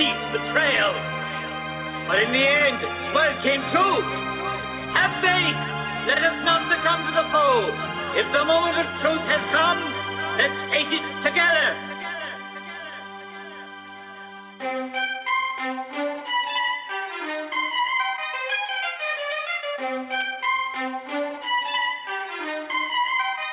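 Clock drift between sender and receiver runs through the whole clip. The sender's clock runs slow, by about one and a half percent. The receiver's jitter buffer keeps draining. The receiver must keep stretching the sound to avoid running dry.

Repeated timing corrections follow from this, from 0.41 s to 23.02 s. The receiver repeats tiny pieces at uneven intervals. Playback runs at about 99% speed, adding roughly 0.3 s overall. Each edit is small.

Scattered short gaps fall between 2.59 s and 4.65 s. About three packets arrived late. The receiver filled each hole by continuing the last sound, around 30 ms in total, with the longest near 10 ms. Each is a brief tick or smear. The G.711 A-law call path leaves nothing above 4 kHz.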